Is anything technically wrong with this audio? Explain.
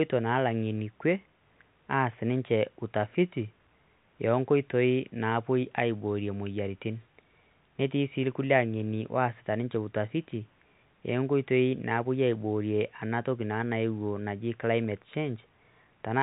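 No, this is speech carried over ordinary telephone-grade coding, consistent with 64 kbps G.711 mu-law, which leaves nothing above about 3.9 kHz and only a faint quantisation hiss that follows the level of the speech, exactly what a normally working phone line sounds like.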